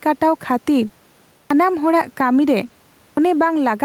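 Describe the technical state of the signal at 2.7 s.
Right around 2.7 s you're hearing short concealed packet loss, running from about 2.67 to 2.71 s. A slice of the call arrived too late for the decoder, so the receiver papered over roughly 20 ms by extending whatever sound came just before, continuing its pitch or using shaped noise, and then crossfaded back into the real signal. What comes out is a quick smear or wobble, and a brief consonant there can simply disappear.

Just ahead of that, from about 2.63 to 2.65 s, there's a lost packet rebuilt from error correction. One packet went missing, but the next one carried a low-bitrate backup copy, so the decoder played that instead and there's no hole. Those 20 ms come out a bit rougher and grainier than the surrounding audio.

Sitting under all of this is gain pumping, with the level swinging by around 5 dB, which squeezes loud and soft parts closer together. 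The likely cause is input gain set far too hot with a fast limiter or compressor reining it in on each peak. The room noise itself stays about 39 dB below the speech.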